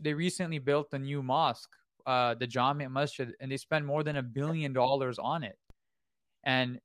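At 4.14 s, after "they spent more than", and again at 5.70 s, after "billion dollars on it", a DC step of about -42 dBFS shifts the waveform's zero line. A 20 Hz high-pass drains it away; each step is heard as a low thump. Unlike a dropout or digital click, the speech carries on intact.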